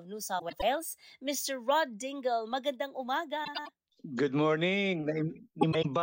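At 0.39 to 0.63 s, 3.44 to 3.69 s and 5.61 to 5.86 s, the speech has frames out of order. Two neighbouring blocks of about 105 ms each arrive swapped, so you get a garbled flutter.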